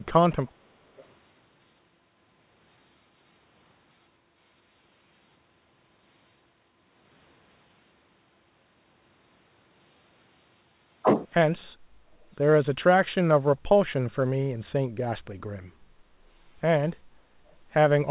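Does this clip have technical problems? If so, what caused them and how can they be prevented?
Yes. At 0.47–0.51 s and 0.97–1.04 s, faint scraps of speech return 416 ms late, about 40 then 30 dB down. This is an echo leak, likely from a loudspeaker at the far end whose echo canceller let residue back into the call. Using a headset there, or better-tuned echo cancellation, would prevent it.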